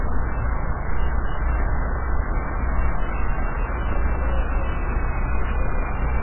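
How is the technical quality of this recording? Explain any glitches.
Poor: the whole clip is dull and watery, with nothing audible above 3 kHz and a swirling texture throughout. This is likely heavy MP3 compression, at a rate that fits roughly 8 kbps. Starved of bits, the encoder cuts all treble at that fixed frequency and zeroes weaker frequency lines, which flicker on and off between frames, and attacks smear.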